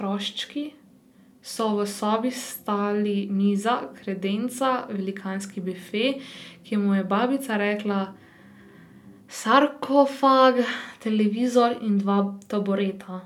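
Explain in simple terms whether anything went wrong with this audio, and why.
Nothing went wrong with this recording: the speech signal stays intact and steady throughout, with no technical faults to be heard anywhere in it.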